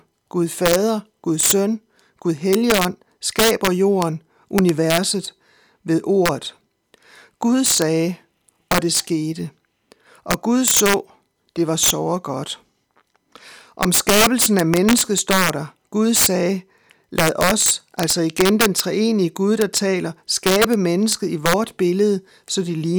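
Integer overflow runs through the whole speech clip. The signal is driven about 6 dB past full scale. Instead of being limited, each sample that exceeds the largest integer wraps around to the opposite sign. Only a small fraction of samples go over, roughly half a percent. These are the loudest peaks. At each one the waveform jumps across the full range. The result is harsh, violent cracks on loud syllables, far sharper and more abrupt than ordinary clipping.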